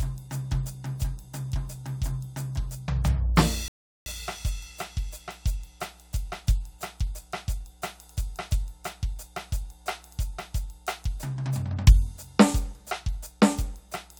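From the first moment, a steady low tone at 60 Hz sits under the music, roughly 30 dB below it. This is mains hum: a ground loop or nearby transformer has let the power line leak into the signal path. It is a smooth, constant drone with only a few low harmonics. That sets it apart from mains buzz, which sounds harsh and edgy from many strong upper harmonics. Unlike a musical bass note, it never changes pitch or fades.

At 3.68 s the music cuts to complete silence and returns at 4.06 s, picking up exactly where it broke off. This is a rebuffering stall: playback ran out of downloaded audio and waited for more data. About 0.38 s is added to the running time, and no music is skipped. A dropout is different: there, material vanishes and the music jumps ahead when it returns.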